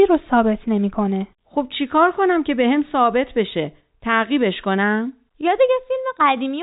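No faults are audible in this speech; it sits in a narrow telephone band with nothing above about 3.8 kHz, as expected of a 64 kbps telephone line.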